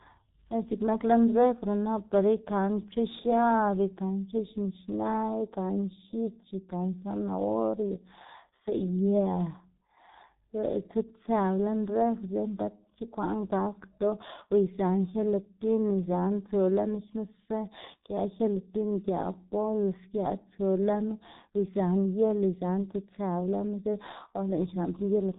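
Throughout, speech passed through the G.723.1 codec, apparently near 6.3 kbit/s, leaving nothing above 3.8 kHz, so voices sound muffled and hoarse, with smeared consonants.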